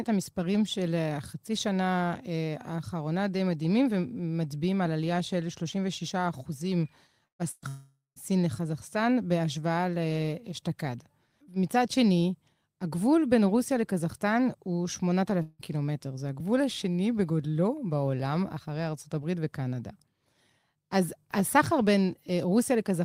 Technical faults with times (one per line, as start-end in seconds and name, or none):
7.27-7.65 burst of packet loss
7.68-8.19 long network dropout
15.42-15.62 long network dropout